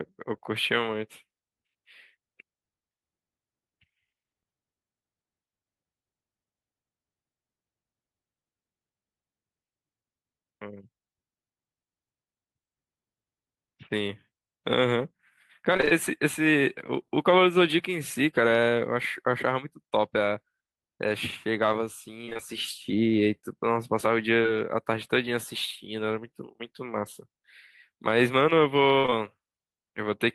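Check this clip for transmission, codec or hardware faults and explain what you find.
Packet loss with concealment appears in the second half of this speech clip, in three forms.

Repeated packet loss (robotic sound) at 15.73–15.93 s and 22.25–22.40 s: five and then four short gaps, the longest about 25 ms, each patched by extending the previous sound, leaving nearly half of each stretch synthetic and choppy.

Short concealed packet loss at 24.42 s, 29.06 s and 29.10 s: roughly 20 ms gaps filled from the preceding sound, heard as a brief smear or wobble.

A burst of packet loss at 28.98–29.06 s drops about 60 ms; the receiver extends and fades the last sound, giving a held buzz or hiss before resuming.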